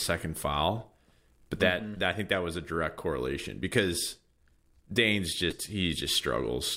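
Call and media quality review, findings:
Compressed frames skipped, 5.50–5.55 s. Speech jumps forward abruptly, losing roughly 70 ms of audio. Around seven consecutive frames never played, consistent with 10 ms codec frames. Probable component: decoder or packet/file input. Frames were missing or rejected as corrupt.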